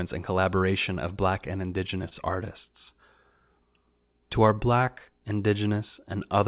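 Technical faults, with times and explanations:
1.46–2.14 s, repeated stalls (stutter): late packets emptied the jitter buffer four times, the longest gap 24 ms. The last sound was held over each wait, so the audio drags without losing anything.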